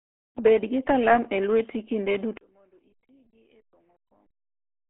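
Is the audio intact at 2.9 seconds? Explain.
No. At 2.9 s the speech sits inside the one-channel-inverted span, which runs from 2.38 s, just after "kalam e lweti kinde", to the end. The level drops by about 35 dB, likely because one stereo channel has reversed polarity and the centred speech cancels when the channels are summed to mono. Only a faint residue remains.

The RealAudio 14.4 codec damage also applies here, as it does throughout the clip. The band is limited to roughly 300 Hz to 3.5 kHz, with nothing above 3.7 kHz. The heavy coding, consistent with an 8 kbit/s stream, leaves what remains of the speech muffled and gargly.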